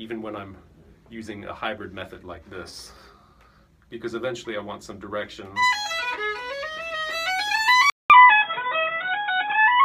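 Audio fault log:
7.90–9.85 s, input switched to a poorer device: the system likely changed to a narrower-band input, so after a 200 ms silence the sound loses everything above 3.8 kHz and turns dull and boxy, with a level change of about 5 dB and new, quiet background noise.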